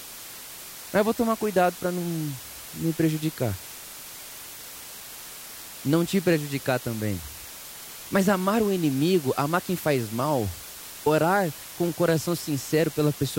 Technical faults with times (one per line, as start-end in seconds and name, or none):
0.00-13.38 low bit depth with dither